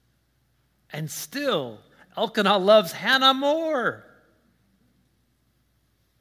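No technical faults can be heard in the speech at any point in the recording.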